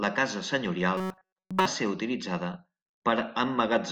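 From 0.97 to 1.66 s, after "la casa", the speech collapses into a rigid metallic buzz pitched at 188 Hz, loosely tracking the words: robotic sound from repeated short buffers. New audio likely arrived too seldom, so a 5 ms slice looped while most real sound was skipped.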